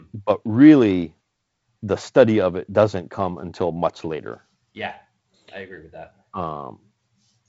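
No technical faults can be heard in the speech, which comes through G.722 wideband telephone coding with nothing above about 7.7 kHz.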